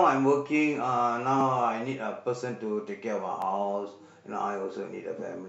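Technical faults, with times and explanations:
1.41 s and 3.42 s: overlapping chunks. The speech was handled in 2.0 s blocks, and each new block began about 12 ms before the previous one had finished, so that 12 ms slice of audio plays twice at each join. The duplicated fragment breaks the continuity of the waveform and puts a brief discontinuity at the seam, heard as a click or stutter. The two events sit 2.0 s apart, matching the chunk length.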